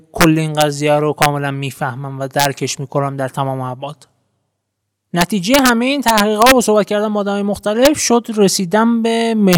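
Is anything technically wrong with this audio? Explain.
Yes. The speech has integer overflow at 0.21–0.24, 0.61, 1.22–1.26, 2.40–2.45, 5.21–5.69, 6.08–6.52, 7.85 and 9.53–9.55 s. Peaks overshoot the limit by about 1 to 4 dB and wrap to the opposite sign instead of being capped. Each overshoot gives a violent crack, harsher than clipping.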